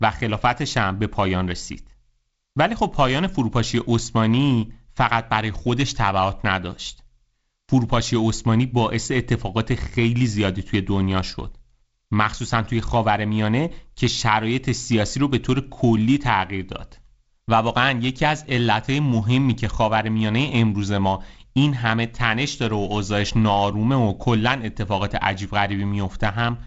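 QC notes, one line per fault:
No faults are heard in this speech clip. It carries the sound of G.722 wideband telephone coding, with nothing above 7.7 kHz and a light, grainy noise that fits the codec's 48 kbit/s mode.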